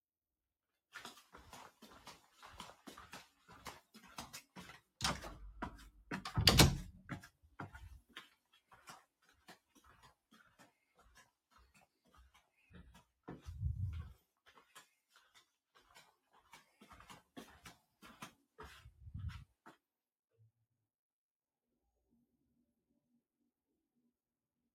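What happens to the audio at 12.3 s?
At 12.3 s the sound is cut by the noise suppressor, inside a stretch from 7.3 to 13.27 s. The suppressor mistakes steady or fading parts for noise and pulls them down by up to about 16 dB, so the sound sinks and its decay is cut short. This sits within the noise suppressor applied to sounds throughout, where a speech-tuned processor swings the level by around 15 dB and makes the audio pump and thin out.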